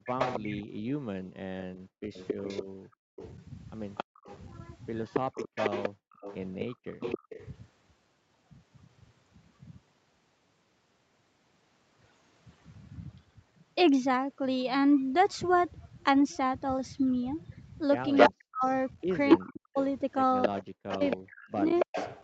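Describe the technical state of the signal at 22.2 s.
At 22.2 s the speech is trailed by a delayed copy of itself, arriving about 275 ms behind the original and only a little quieter, so the voice is heard twice. This is an echo leak, present from 19.29 s to 22.21 s. The likely cause is a far end playing the call through a loudspeaker whose echo canceller let part of the pickup through, sending it back within the call's 8 kHz band.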